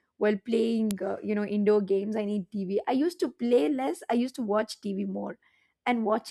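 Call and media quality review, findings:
Sharp click at 0.91 s, just before "uh you know indoor". File header played as audio: WAV header bytes left in at a piece boundary, decoded as samples. Concatenation or streaming stage.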